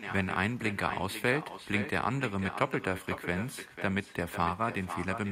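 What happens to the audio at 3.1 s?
At 3.1 s, as throughout the speech, echo with no canceller: a far-end loudspeaker feeds the mic, returning each phrase about half a second later, about 10 dB quieter, appearing as faint delayed duplicate spectrogram patterns.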